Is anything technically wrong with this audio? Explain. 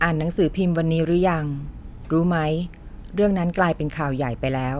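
No, nothing technically wrong can be heard in this speech recording.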